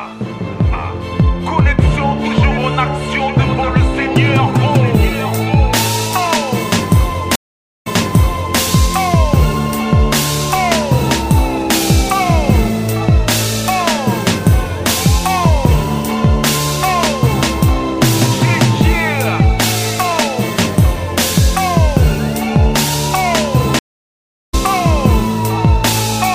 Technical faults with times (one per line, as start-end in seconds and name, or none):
7.35-8.59 stream reconnect
23.79-24.55 stream reconnect